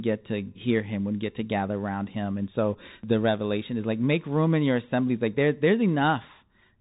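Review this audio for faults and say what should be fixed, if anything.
The whole clip runs through a Bluetooth CVSD headset codec. Nothing gets past about 3.8 kHz, and the one-bit delta coding, which fits CVSD's 64 kbit/s stream, can't track fast loud peaks, so sibilants turn scratchy over a grainy hiss. To prevent it, record on the headset's wideband mode or a wired mic instead of the hands-free profile.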